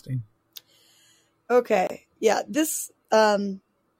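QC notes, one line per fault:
1.87–1.91 s, damaged data in a compressed stream: a roughly 40 ms glitch cuts into the speech. Corrupted bytes in the coded stream leave the decoder misreading those frames, losing sync, and outputting garbage until it locks onto a valid frame header again.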